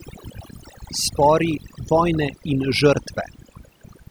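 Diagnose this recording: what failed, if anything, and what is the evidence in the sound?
Overdone noise removal, at the processing stage, runs through the whole clip. Between phrases the background drops to near silence with twinkling specks. A noise reduction stage set too aggressively is cutting individual frequency bands far down or off whenever they sit close to its noise estimate. The quieter components of the speech fall under that threshold and are removed along with the noise.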